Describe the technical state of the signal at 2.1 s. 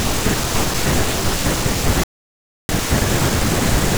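At 2.1 s the speech is inside a playback stall running from 2.04 to 2.69 s. The output falls silent in mid-flow for about 0.65 s and then the sound resumes. The likely cause is the player running out of buffered data or its thread being blocked until it recovered. What separates it from a brief dropout or click is the length: this is a sustained, clean silence of well over half a second.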